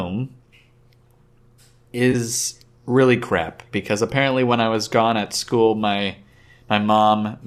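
At 2.12 to 2.15 s the speech has a brief AAC frame loss with concealment. About 20 ms of coded audio went missing, which fits two low-delay frames of roughly 10 ms, likely from AAC-ELD. The decoder patched the hole from the preceding spectrum, so the sound smears into a short noisy, phasey blur rather than dropping out. On a spectrogram the harmonics blur into a diffuse vertical smudge. The waveform keeps its level but briefly loses its regular periodic shape.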